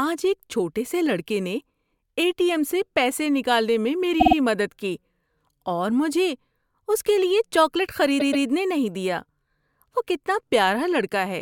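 A stutter at 4.19 s, after "سے پیسے نکالنے میں", replays a 52 ms slice three extra times; another at 8.19 s, after "اس کے لیے چاکلیٹ", repeats a 131 ms slice twice more. These are repeated frames: compressed blocks duplicated before decoding.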